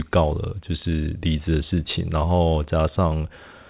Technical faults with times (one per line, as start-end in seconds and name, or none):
none